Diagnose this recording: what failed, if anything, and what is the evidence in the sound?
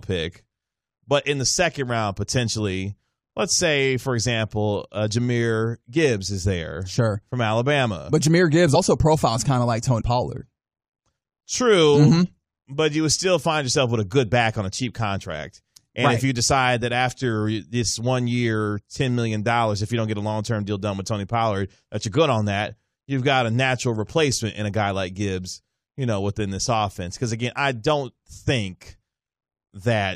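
The codec stage failed, with compressed frames skipped. The speech jumps ahead at 8.74 s, before "profiles kind of like", and at 10.00 to 10.02 s, after it. Each gap loses about three 23.2 ms frames.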